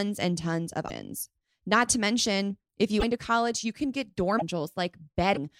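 At 0.88 to 0.90 s, 2.99 to 3.04 s, 4.38 to 4.42 s and 5.34 to 5.37 s the speech briefly breaks and skips forward. Each break lasts roughly one to two 26.1 ms frames. A likely cause is a broken MP3 bit reservoir: frames were lost, so the next frame looked back for borrowed data, decoded bytes from the wrong frame, and landed further along. On a spectrogram each break is a narrow vertical seam where the harmonic pattern stops and resumes out of step. The waveform shows an abrupt discontinuity at the same points.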